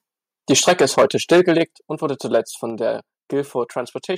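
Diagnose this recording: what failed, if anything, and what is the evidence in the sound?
Microphone overload is the main problem, and it happens at the converter stage. From 0.5 to 1.62 s, right up to "und wurde", the loudest parts are flattened against the converter's limit. The peaks are pushed about 12 dB past the limit, and roughly one sample in twenty is clipped, which gives that gritty, crackling edge. A brief second hit at 2.34 to 2.37 s, just after "und wurde", goes only about 1 dB over. The likely cause is the input gain being set too hot.

The microphone volume is also stepped down three times, which points to the call processing stage reacting to those overloads. The level drops abruptly by about 2 dB at 0.69 s, by about 6 dB at 1.68 s just before "und wurde", and by about 3 dB at 2.7 s. The voice and the background fall together each time, so this is likely the software's automatic gain control cutting the device input after it detected clipping, rather than a change at the source.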